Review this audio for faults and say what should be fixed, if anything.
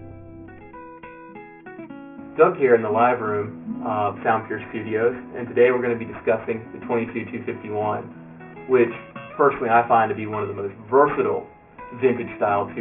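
Aliasing runs through the whole clip. The audio was downsampled without an anti-aliasing filter, and what the band edge suggests is a drop from a high rate to about 6 kHz, which puts the folding point at 3 kHz. Everything that was above 3 kHz has been mirrored back below it as false, unrelated tones, roughly 20 dB under the wanted sound. The upper range sounds gritty and metallic, and the spectrum runs hard up to the 3 kHz edge. To prevent this, low-pass filter below the new half-rate before reducing the sample rate, or use a proper resampler that does so.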